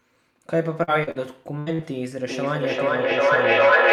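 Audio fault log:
0.83 s, 1.03 s, 1.11 s and 1.75 s, short concealed packet loss: each is a brief smear or wobble lasting well under a tenth of a second. About 40 ms of audio arrived too late each time, and the receiver bridged it by extending the preceding sound before blending back.
1.59 to 1.73 s, burst of packet loss: a held buzz or fading hiss, then the sound jumps ahead. Roughly 80 ms went missing in a row; the decoder stretched the last sound across the gap, lowering it as it went, so that stretch is lost.
2.29 s to the end, feedback echo between two devices: everything comes back around every 0.4 s or so, thinner and ringing, and the repeats build up instead of fading, peaking about 8 dB above the speech. A second device nearby is replaying the call into a microphone.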